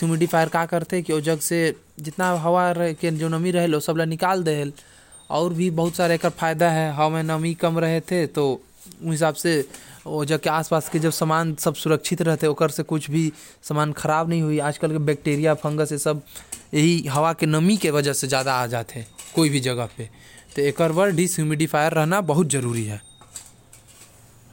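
No technical faults can be heard anywhere in the recording; the signal stays steady and intact throughout.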